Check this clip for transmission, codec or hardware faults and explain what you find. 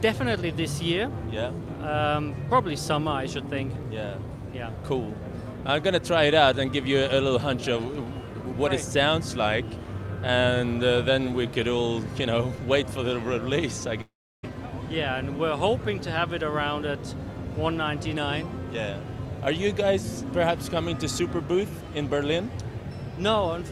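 One fault stands out. From 14.01 to 14.45 s there is a long network dropout. About 420 ms of audio never arrives, likely lost in transit. The receiver extends the last sound as a fading buzz, and silence follows. The audio then resumes without the lost part.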